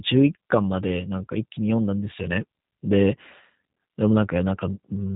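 A speech recording carries G.729 codec damage from start to finish. The damage is plainly audible. Nothing reaches above about 3.9 kHz, so the sound is dull and boxy. The codec rebuilds each short frame from a vocal tract model, a pitch predictor and a few pulses. That leaves the voice rough and slightly synthetic. The quality fits the G.729A variant at 8 kbit/s, a common narrowband VoIP setting.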